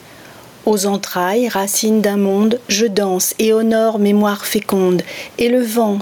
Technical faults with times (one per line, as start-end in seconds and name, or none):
0.00-6.01 gain pumping